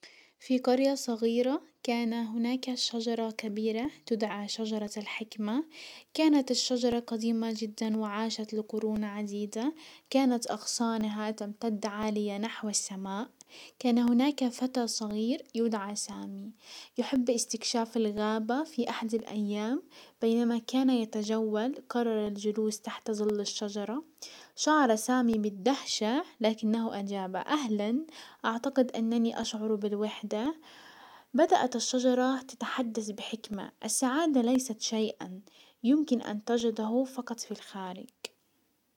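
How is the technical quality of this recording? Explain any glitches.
The recording has a regular ticking fault. Periodic USB or driver dropouts run from 2.82 to 38.65 s, one every 1.024 s, about forty in all. Each time a blocked bus or driver drops roughly a millisecond of audio and leaves silence, so the speech carries evenly spaced ticks. Their strict clockwork spacing, and their absence in pauses, set them apart from random clicks or network packet loss.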